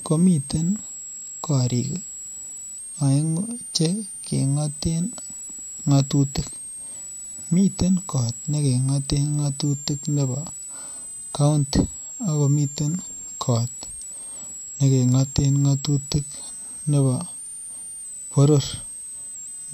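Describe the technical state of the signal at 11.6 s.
A switching supply whistle is present at 11.6 s, as it is throughout the speech. A power supply is running in an audible burst mode or beating with another one, producing a high tone that wanders between about 7.3 and 9.0 kHz, roughly 15 dB below the speech.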